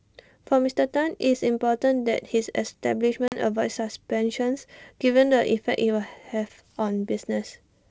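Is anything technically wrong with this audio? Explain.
Yes. At 3.28 to 3.39 s the speech shows packet loss on an ADPCM call: about 40 ms of audio, roughly a couple of packets, drops out and is filled with silence, leaving a hard-edged hole. Because ADPCM codes only differences, the receiver's predictor and step size lose track of the sender's, so the speech comes back slightly distorted before resynchronising. The underlying G.722 wideband coding, which points to the 64 kbit/s mode, stays clear.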